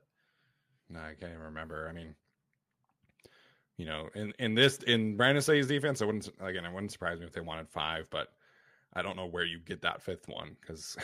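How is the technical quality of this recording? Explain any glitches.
The recording's technical quality shows no glitches to explain. No fault can be heard at any point in the speech.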